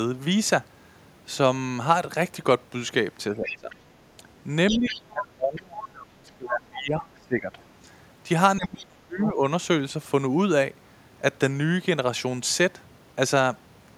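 From 3.32 to 3.84 s and briefly at 4.17 s the talker dips by up to about 15 dB. That's speech suppressed in double talk, likely an echo canceller ducking everything while both sides overlap. From 4.68 to 5.24 s the other side's voice leaks through, about 10 dB under the talker, likely residual loudspeaker echo. The talker dips again from 4.71 to 4.96 s, then sinks hard, up to about 25 dB, from 5.12 to 7.56 s and from 8.57 to 9.42 s. A short scrap of leaked far-end voice pokes through around 9.21 to 9.31 s.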